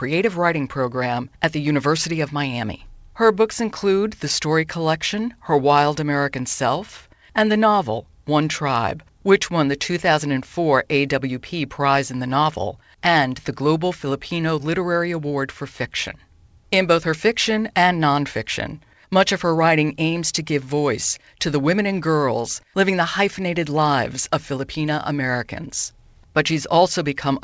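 No technical faults can be heard anywhere in this recording.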